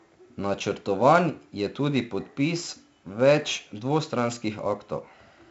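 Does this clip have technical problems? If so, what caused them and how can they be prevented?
Yes. Throughout the speech, a gritty hiss follows every loud syllable, turning harsher on sharp onsets, and the sound is dull with nothing above 7.7 kHz. This is heavy 4-bit ADPCM compression. Each sample becomes a coarse step from a prediction, and the step size lags on sudden attacks. The band limit fits 64 kbps at a 16 kHz sample rate. To prevent it, record and store in 16-bit PCM or a modern codec.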